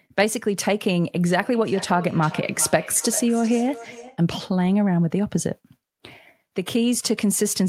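A speech recording where, from 1.36 to 4.24 s, each phrase returns as a delayed repeat about 16 dB below the voice, at intervals of roughly 0.4 s. This is feedback echo between two devices: a second device in the same room plays the call back into this microphone, whose echo canceller cannot remove sound it did not play.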